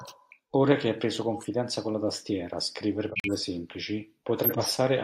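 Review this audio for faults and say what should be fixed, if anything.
Corrupt frame decoded at 1.34–1.48 s, after "che hai preso", and 4.44–4.73 s: damaged compressed frames were still played, spraying misplaced energy as glitches peaking around -25 and -10 dBFS.

Corrupt frame muted at 3.10–3.42 s, after "con la tastiera scrivere": the decoder rejected a run of damaged frames, leaving an abrupt 0.32 s silent hole.

Protect the compressed stream with checksums and error correction, and conceal rejected frames rather than playing or silencing them.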